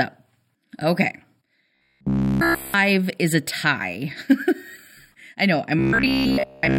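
Speech that turns twice into a rigid, metallic buzz, from 1.75 to 2.74 s and again from 5.79 to 6.78 s, with a fixed pitch of 66.7 Hz that only loosely tracks the talking. It is robotic sound from repeated short buffers, likely caused by audio arriving too seldom, so the same 15 ms fragment is looped in place of skipped audio. The first stretch is repeats throughout; the second is mostly repeats.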